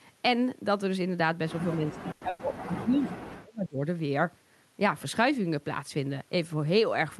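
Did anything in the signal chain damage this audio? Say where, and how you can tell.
Yes. Between 1.76 and 3.83 s the speech sinks by roughly 35 dB and breaks up over about two seconds, likely echo-canceller suppression during double talk in the call processing.

At 2.11–2.24 s and again at 2.29–2.42 s, the sound is stretched into a fading fill, then jumps ahead. These are bursts of packet loss on the network, each skipping about 100 ms.

Brief rough, noisier patches at 2.21–2.23 s and 2.39–2.41 s show lost packets rebuilt from error correction, as the Opus decoder played lower-quality in-band copies.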